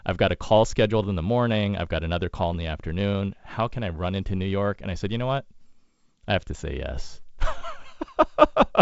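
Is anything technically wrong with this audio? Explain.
No, nothing in this speech recording is technically wrong. It carries the sound of G.722 wideband telephone coding at 56 kbit/s: nothing reaches above about 7.7 kHz, and the coding leaves only a light, faint hiss in the upper band and a little extra noise in the lower one.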